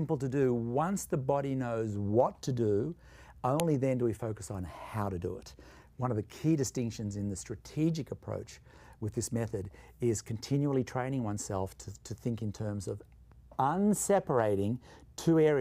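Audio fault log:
3.60 s: file header played as audio. A single sharp, loud click cuts into the sound at this point, which marks where a second piece of audio was joined on without its WAV header being stripped. The few dozen bytes of header data are read as ordinary samples, producing an instant, loud transient unrelated to the surrounding signal. Being only a millisecond or so long, it registers as a snap rather than a tone.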